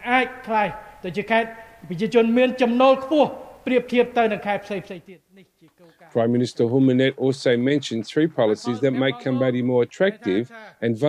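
Nothing is technically wrong with this audio clip.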